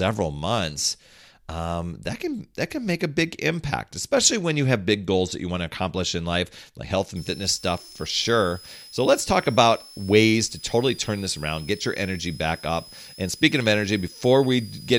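Right after "in life like health", at 7.16 s, a switching supply whistle starts and runs to the end. It's a thin, high tone in the 4.8 to 5.5 kHz range, roughly 20 dB under the speech, from a switching power supply running in an audible burst mode or beating with another one.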